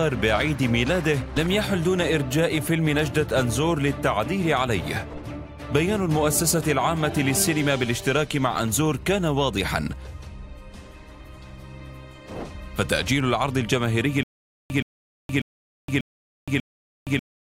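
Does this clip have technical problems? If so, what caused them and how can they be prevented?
Yes. Stutter with silent gaps from 14.23 s to the end: a 123 ms burst repeats five times every 592 ms with 469 ms of digital silence between, likely a stalled stream replaying its last fragment. Deeper buffering and a more reliable connection would prevent it.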